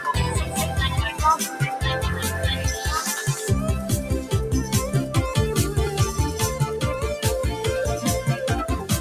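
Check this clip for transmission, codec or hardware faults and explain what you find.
One fault turns up, and it is a processing fault rather than a transmission or hardware one. Sound cut by the noise suppressor, from 1.44 to 1.61 s: the suppressor misjudged this stretch as noise and attenuated it, so for roughly 150 ms the level sags by up to about 6 dB, leaving a brief dip before the sound recovers.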